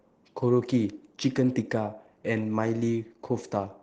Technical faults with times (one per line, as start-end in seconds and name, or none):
none